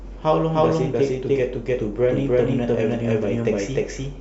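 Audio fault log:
Throughout, doubled audio track: the speech repeats itself about a third of a second later at roughly equal loudness, dry and full-band with no decay, so it overlaps itself. This is likely a second, slower capture path, or two offset copies, mixed together.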